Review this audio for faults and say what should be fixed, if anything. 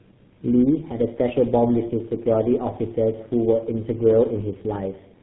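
Tandem speech coding runs through the whole speech clip. The audio sounds like it passed through three low-rate speech coders in a row, which fits a chain of G.723.1, G.726 and GSM full rate with G.711 links between them. Each coder re-encodes the errors left by the one before, so the damage compounds into a rough, warbly, muffled sound. Nothing remains above 3.9 kHz. To prevent this, keep the call in one codec end to end or use transcoder-free operation at network borders.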